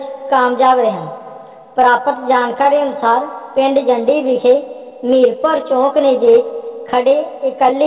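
The sender's audio clock runs roughly 3 percent slower than the receiver's. This clock drift between sender and receiver keeps the jitter buffer starved, so the receiver has to stretch the stream again and again instead of playing it at an even pace, and the timing never quite settles. From 0.25 s to 7.77 s the audio is slowed to about 98 percent speed through repeated timing corrections. These are small, unevenly spaced edits that all repeat short pieces, adding about 150 ms in total. They come across as slight hiccups and a faintly unsteady, dragging tempo rather than any single obvious break. On top of that, scattered short gaps appear where individual packets were lost or arrived too late and the receiver bridged each hole by continuing the last sound. Between 0.2 s and 3.6 s there are around seven of them, each only a few milliseconds long. From 4.9 s to 6.3 s there are about three, the longest around 10 ms. 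Each is heard as a brief tick or smear. All of this rides on a call path whose narrowband coding, consistent with G.711 A-law at 64 kbps, leaves nothing above 4 kHz.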